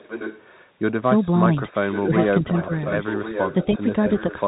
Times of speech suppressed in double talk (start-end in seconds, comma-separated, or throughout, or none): 2.07-2.12, 2.43-2.70, 3.73-3.82